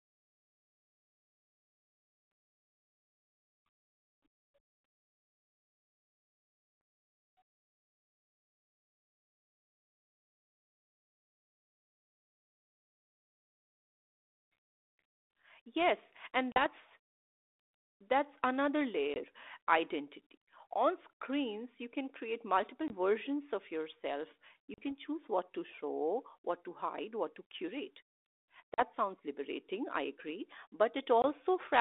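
Packet loss on an ADPCM call drops 20 to 40 ms of audio at 16.52, 19.14, 22.88, 24.74, 28.74 and 31.22 s, each loss about one or two packets. The decoder's adaptive predictor and step size then fall out of step with the sender's, so every abrupt silent gap is followed by slightly distorted speech before the sound settles.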